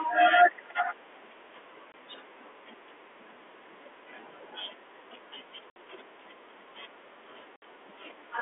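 Packet loss filled with silence at 1.92–1.94, 5.70–5.76 and 7.56–7.62 s: dropped 20 ms packets become hard-edged silent gaps of 20 and 60 ms in the telephone-band speech.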